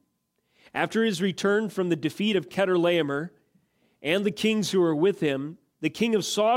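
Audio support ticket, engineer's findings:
No faults found on this speech clip, nothing in the signal path needs chasing, so the ticket can be closed.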